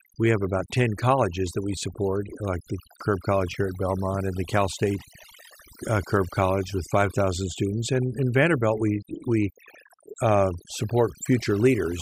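From start to finish the background sits at near silence broken by twinkling specks. This is overdone noise removal: the reduction was set too strong, switching off frequency bands near its noise estimate and taking quieter parts of the speech with them.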